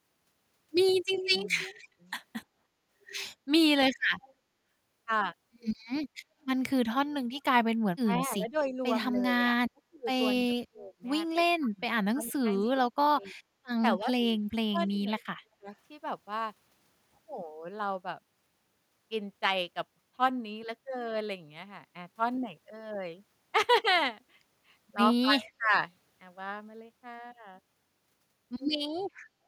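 A steady buzz near 46.9 Hz runs throughout. It is a block size mismatch (truncated), which fits 1024-sample blocks losing their ends. Speed stays normal.

From 1.16 to 1.88 s, a copy of the speech returns about 0.29 s late, roughly 10 dB down. This is echo leak, likely from a loudspeaker that the echo canceller did not fully cancel. Fainter repeats follow at 4.18 to 4.33 s.

From 6.25 to 6.38 s, the room sound dips about 7 dB. This is background gated by the echo canceller, lasting roughly 150 ms.

Between 8.0 and 13.44 s, the speech drops in pieces, by up to about 30 dB. This is speech suppressed in double talk, likely because both sides spoke at once and the canceller turned the speech down. The drops total about 2 s. Within that span, faint echo leak returns from 12.26 to 12.66 s, about 0.3 s late and far below the speech.

From 13.99 to 15.71 s, the speech is suppressed again, for about 1 s in total. 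At 25.39 to 25.73 s, it dips once more, by about 20 dB.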